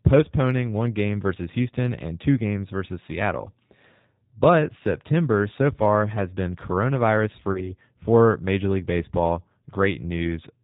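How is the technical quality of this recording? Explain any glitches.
Quality is limited by low-bitrate voice coding throughout, with one brief dropout.

G.729 codec, throughout: the speech, rebuilt from a vocal-tract filter and sparse pulses, which points to an 8 kbit/s coder, sounds band-limited below 4 kHz, rough and plainly synthetic.

VoIP packet loss concealed by the speech codec, 7.52 to 7.73 s, right after "far has been coronavirus": about 30 ms went missing, consistent with one lost packet. The decoder extended its last pitch and filter with fading gain, and the voice stayed weak until about 7.73 s.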